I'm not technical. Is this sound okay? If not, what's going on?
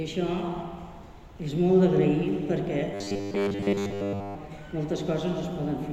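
No. From 2.94 to 4.36 s there's robotic sound from repeated short buffers, a rigid metallic buzz at 100 Hz. The software likely kept replaying the last 10 ms while waiting for new audio, skipping most of the real sound. Unlike a steady hum, the buzz still loosely follows the sound.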